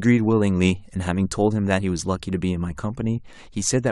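No technical faults can be heard anywhere in the recording; the speech signal stays continuous and intact throughout.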